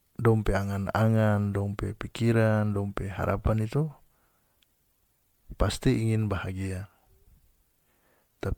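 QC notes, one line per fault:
Throughout, generation loss. The speech sounds swirly, smeared and hollow, with blurred attacks and nothing above 19.9 kHz. The likely cause is around ten MP3 passes, each requantising on a shifted frame grid. The damage stacks beyond what the bitrate, which fits 128 kbit/s, explains.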